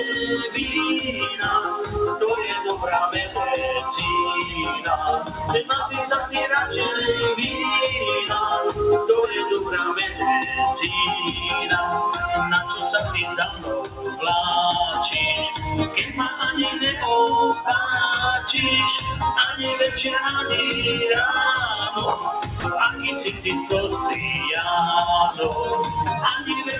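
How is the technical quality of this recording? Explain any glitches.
The recording has audible processing faults: a speech noise suppressor is working against the material throughout, it clamps down in four places, and a brief gap appears near 22.6 s. The audio passed through a narrowband call path with nothing above 4 kHz, which fits G.711 A-law coding.

Noise suppressor applied to music or sounds: a suppressor tuned for speech stays active for the whole clip, treating steady tones, ambience and decays as noise. Gain therefore swings by roughly 5 dB, so the sound pumps and thins, with attacks surviving better than sustained parts.

Sound cut by the noise suppressor: at 5.24–5.39 s (about 6 dB), 13.24–14.23 s (about 9 dB), 15.88–16.4 s (about 7 dB) and 23.3–23.46 s (about 9 dB), the suppressor judged the material to be noise and pulled it down. Held or fading sound sinks in level or its tail is cut short.

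Sound dropped by the voice detector: at 22.6 s, for about 40 ms, the sound disappears and is replaced by steady comfort noise. The likely cause is the sender's voice activity detector classing the material as background and briefly stopping transmission, so the receiver filled the gap with generated noise.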